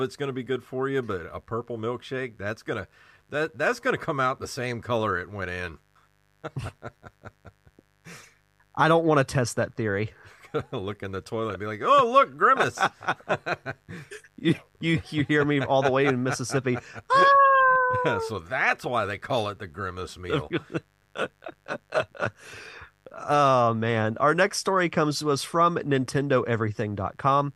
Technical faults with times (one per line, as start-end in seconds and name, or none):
0.00-27.55 mains buzz